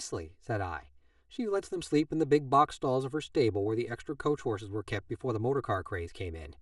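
Speech that sounds hollow and phasey from start to finish, caused by channel delay (comb filtering): one channel runs about 3 ms late, carving evenly spaced notches from around 200 Hz upward.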